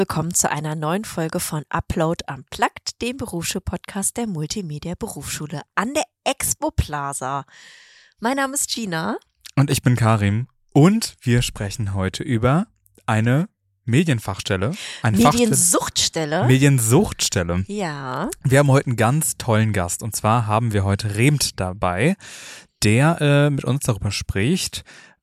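There's a single loud pop at 9.72 to 9.74 s, a sharp click jumping around 10 dB above the surrounding sound, which keeps running underneath it. That's likely a voltage spike from a plug, switch, static discharge or driver glitch getting into the signal chain.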